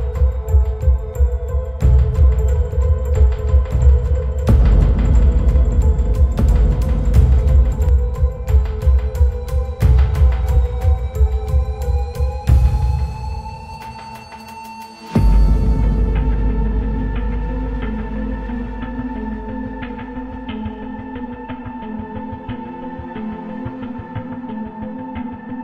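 The audio carries a doubled audio track from 2.19 s to 7.89 s: a full-band second copy trails the original by roughly two seconds, about 5 dB quieter, with no decay or room colour, switching on and off abruptly. The likely cause is a slower second capture path or a misaligned edit.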